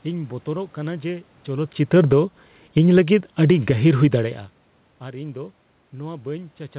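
From 1.79 s to 3.91 s the automatic gain falls. The gain control judged the input too loud, or its background noise too strong, and pulled its level down step by step, by about 8 dB. The speech sinks gradually. The room noise behind it sinks with it.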